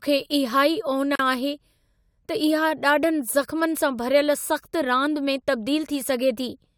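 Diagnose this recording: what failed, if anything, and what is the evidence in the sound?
A gap at a join of encoded pieces, at the codec stage. At 1.15 s the speech drops out in a gap of about 40 ms. It resumes at 1.19 s where it stopped. The edges are smeared. Untrimmed encoder delay and last-frame padding remain at the splice.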